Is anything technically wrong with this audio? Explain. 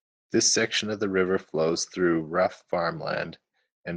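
No technical faults are audible.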